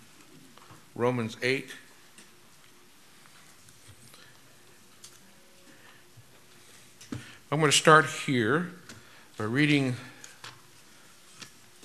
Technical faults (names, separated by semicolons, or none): repeated frames